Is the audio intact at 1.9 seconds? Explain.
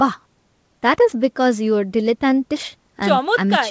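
Yes, at 1.9 seconds the speech is intact, with no dropout, glitch or other fault at that moment.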